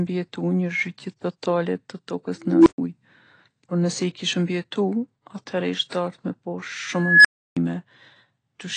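Speech recording with plainly audible codec damage throughout: a dull, smeared sound with nothing above 9 kHz, likely from AAC compression at a low bitrate, consistent with about 32 kbps. An unstable filter, a recursive filter whose feedback grows without limit, appears twice. From 2.43 to 2.78 s a tone near 300 Hz swells over about 235 ms, clips, then drops to silence for 120 ms. From 6.96 to 7.57 s a tone around 1.5 kHz builds over about 289 ms before a 320 ms dropout.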